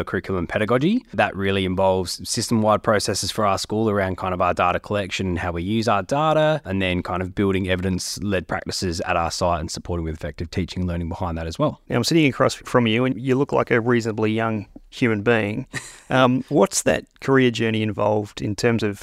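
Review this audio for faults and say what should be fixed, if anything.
No faults heard; nothing needs fixing.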